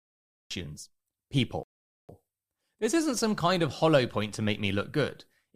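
A cut-off start runs from 0 to 0.51 s in this speech clip: the recording began late, so the first half-second is digital silence and the speech then appears abruptly in mid-sound, with no natural attack or fade-in. A rebuffering stall follows from 1.63 to 2.09 s, where the player ran out of downloaded audio, dropped to silence for about 455 ms, then resumed exactly where it stopped, adding time without losing any sound.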